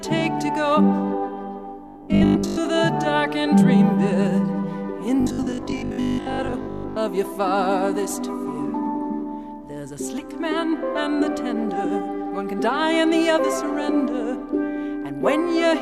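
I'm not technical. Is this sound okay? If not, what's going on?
No. From 1.87 to 2.57 s and again from 5.21 to 6.97 s there's a robotic sound from repeated short buffers: a stiff, metallic 50 Hz buzz. Most likely, audio arrived too slowly, so tiny 20 ms slices got replayed, covering most of the first stretch and about half the second.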